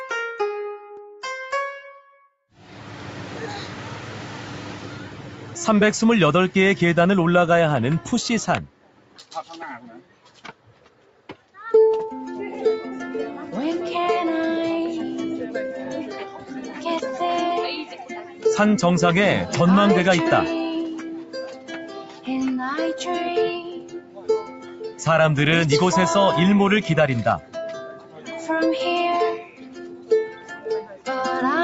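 A speech-tuned noise suppressor has been left running on non-speech sound, which passes through call microphone processing with nothing above 8 kHz. The suppressor treats sustained tones, ambience and decays as background noise, so its gain swings by roughly 10 dB as the material changes. Onsets get through, but held sound sinks and tails are shortened, giving a pumping, thinned character throughout. The clearest cases of sound cut by the noise suppressor fall at 8.67–9.34 s, 9.83–11.57 s, 16.32–16.51 s, 17.85–18.45 s, 20.94–22.28 s, 23.59–25.02 s, 27.4–28.49 s and 29.38–31.07 s. In these spans the sustained or fading content is pulled down by about 12 dB at its deepest, though only about 8 dB at 16.32 s, about 9 dB at 17.85 s and about 11 dB at 29.38 s.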